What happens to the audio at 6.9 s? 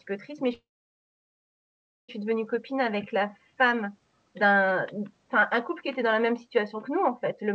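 Nothing goes wrong at 6.9 s: the speech there is intact, carried through the call path with its usual band limit at 8 kHz and no fault at that moment.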